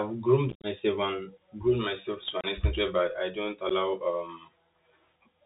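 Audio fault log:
Throughout: Bluetooth CVSD headset codec. The speech is squeezed into the narrowband Bluetooth headset path. A one-bit up/down coder with an adaptive step cannot follow fast, loud high-frequency movement, so s sounds turn scratchy and a grainy hiss sits under the speech. The damage is plainly audible, which fits a 64 kbps CVSD link. On a spectrogram there is a hard ceiling at 4 kHz with nothing above it, and a noise floor fills the gaps between syllables.
0.50–0.66 s, 2.41–2.46 s, 3.69 s: unconcealed Bluetooth headset packet loss. Voice packets between headset and phone went missing, and nothing was patched into the holes. The first event is the worst. About 109 ms of audio drops out across 135 ms in scattered pieces, the longest about 56 ms, and it sounds like a chopped, crackling stretch that points to dozens of lost packets. At 2.41 s about 30 ms vanishes, and at 3.69 s about 11 ms. 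The waveform shows flat, square-edged gaps, and the speech resumes briefly quieter after each one.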